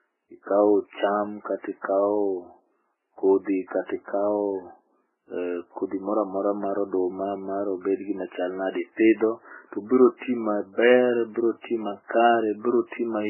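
Throughout, the audio was likely passed through a chain of lossy codecs, transcoded from very low-bitrate MP3 through Vorbis into MP3 again. The speech has nothing above 3 kHz, sounding dull and band-limited, with layered smeary, warbling artefacts from each stage heard together.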